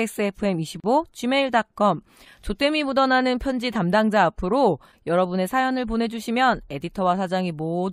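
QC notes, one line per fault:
0.80–0.84 s, gap at a join of encoded pieces: the speech drops into a gap of about 37 ms with smeared edges, then resumes where it stopped. Two separately encoded pieces were butted together untrimmed, leaving encoder start delay and final-frame padding in place.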